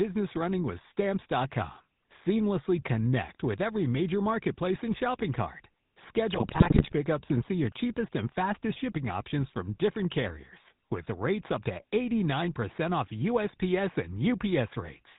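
Speech clip. The whole recording carries the buzzy, gravelly roughness of the GSM full-rate codec, with nothing above 4 kHz and plainly audible damage, which fits 13 kbps GSM. From 6.32 to 6.93 s, GSM bit errors corrupt the decoder's filter, pitch and gain values, so the speech breaks into squawks, pops and gargling.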